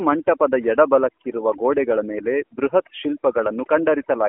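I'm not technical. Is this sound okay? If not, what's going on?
No. Through the whole clip, the gaps between phrases drop to an unnatural near-silence with twinkling specks. This is overdone noise removal: a cleanup tool set too strong cut away background noise along with the softer parts of the voice.

The voice also sounds buzzy, boxed-in and robotic from start to finish, like a poor mobile phone call. This is the AMR narrowband mobile codec, an older phone-call format that rebuilds speech from a simplified model and discards everything above about 3.5 kHz.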